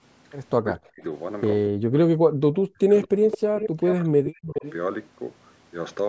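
From 0.61 to 1.03 s, and again across 1.69 to 4.64 s, the speech is suppressed in double talk. Roughly 2 s of the longer span is affected. The speech dips by up to around 40 dB or drops out in pieces, most likely because an echo canceller mistook it for loudspeaker echo while both sides talked. A waveform shows the envelope collapsing to near-silence, and a spectrogram shows harmonics fading or vanishing in patches.

Echo leak appears at 3.31–3.38, 3.56–3.68, 3.86–3.95 and 4.26–4.73 s as short scraps of a delayed copy of the speech. They arrive about 396 ms late at roughly 10 dB below the direct sound, likely from a loudspeaker echo that the far end's canceller didn't fully remove. On a spectrogram these show as faint repeats of earlier harmonic patterns, capped like the rest at 8 kHz.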